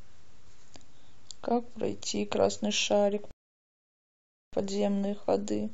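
At 3.31 s the speech halts in a rebuffering stall. The player ran dry, holding silence until 4.53 s, then resuming exactly where it stopped, adding 1.2 s.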